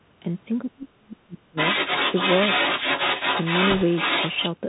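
From start to finish the speech sounds narrow and boxed in, with nothing above about 4 kHz, a granular hiss under everything, scratchy s sounds and roughness on loud bright syllables. That is the Bluetooth CVSD headset codec, whose one-bit up-or-down coding, consistent with a 64 kbps link, cannot track fast high-frequency movement. Its adaptive step lags behind sharp changes, so loud, bright sounds outrun the step and distort.

Between 0.63 and 1.57 s the talker's level drops sharply, at its deepest by about 35 dB, and parts vanish in pieces for roughly 0.7 s in total within that span. This is speech suppressed in double talk. Both ends were most likely speaking at once, and the echo canceller, unable to tell the local talker from the loudspeaker echo, turned everything down together and took the wanted speech with it.

From 1.56 s to 4.5 s a second voice runs under the talker at roughly equal loudness. 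This is the other side's voice leaking through. The remote party, played on the talker's loudspeaker, likely reached the microphone, and the echo canceller failed to subtract it. The leaked voice therefore competes directly with the talker instead of sitting faintly in the background.

From 3.70 to 3.83 s a rushing, crackly noise rides over the sound for about 0.13 s, without any sharp clicks. These are bit errors on a Bluetooth voice link, with a few percent of bits flipped across many consecutive frames. In CVSD no bit outweighs the others, so each error stays in proportion to the speech level and then fades. The damage is a burst of gritty noise rather than pops.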